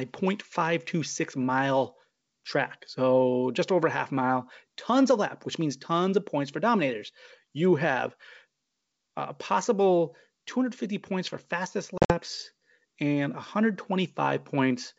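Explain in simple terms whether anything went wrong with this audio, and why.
Right after "points for fastest", from 11.98 to 12.16 s, the sound drops into brief silent holes. This is packet loss on an ADPCM call, which briefly confuses the decoder.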